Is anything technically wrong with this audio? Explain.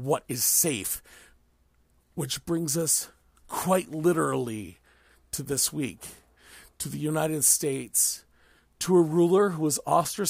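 No, the signal holds steady throughout, with nothing in it that points to a technical problem.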